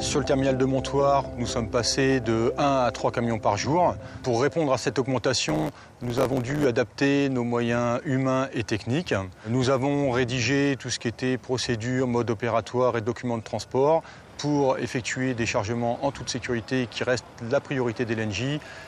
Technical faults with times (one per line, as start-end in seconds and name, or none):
5.48-6.65 block size mismatch (truncated)